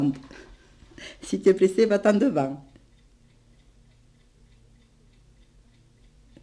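No technical faults are audible.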